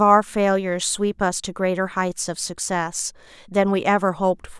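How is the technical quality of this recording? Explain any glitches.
No glitches turn up here, so there's nothing to explain and the recording holds together the whole way.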